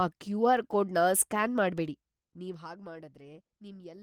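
Listening through the speech, nothing stood out as a technical problem at any point.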